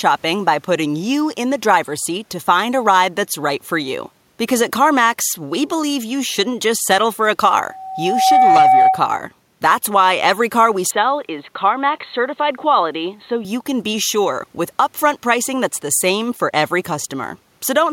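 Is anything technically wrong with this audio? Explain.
Yes, there are two faults. From 7.68 to 9.09 s there is loudspeaker feedback squeal. A steady 760 Hz tone swells up over under a second and peaks about 5 dB above the speech. The microphone is catching its own loudspeaker, and the loop gain at that frequency rises above one.

From 10.91 to 13.45 s the speech turns dull and narrow. A faint new background noise sits roughly 45 dB below it. There is no gap, and the level stays the same. The likely cause is the input switching to a poorer device with a narrower band.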